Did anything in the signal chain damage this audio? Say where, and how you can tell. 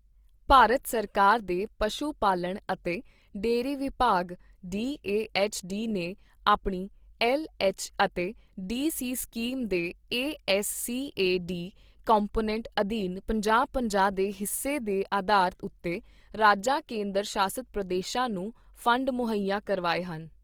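Yes, at the codec stage, for the full length of this speech recording. The damage is plainly audible: voiced tones sound noisy, rough and grainy rather than swirly, and the bandwidth stays full, with content reaching about 20.2 kHz. That combination likely points to Opus compression in its music (CELT) mode, at a low rate that fits about 24 kbps. The encoder preserves each band's energy but rebuilds starved bands from folded or noise content.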